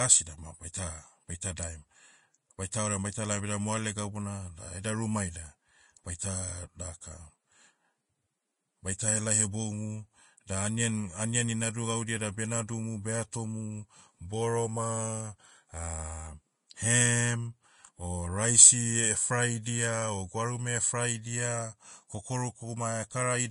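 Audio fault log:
Throughout, Vorbis compression, likely, at a pretty low setting: the speech has a hissy, grainy edge, with nothing at all above 10.5 kHz because the encoder has chopped the top off. What treble is left got quantised so coarsely that its fine detail turned into noise of roughly the same energy, so tones sound roughened. The damage is plainly audible and fits a bitrate somewhere around 33 kbps.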